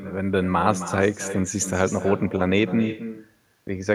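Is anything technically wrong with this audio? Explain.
Yes. Throughout the speech there is echo with no canceller. The far end is playing the call through a loudspeaker, its microphone captures that playback, and no echo canceller strips it out, so the talker's own voice returns after the network round trip, roughly 300 ms later. Each phrase is trailed by a quieter, thinner copy about 11 dB down. On a spectrogram, every syllable's harmonic pattern repeats as a fainter, time-shifted ghost; the waveform shows smaller duplicate bursts following each peak.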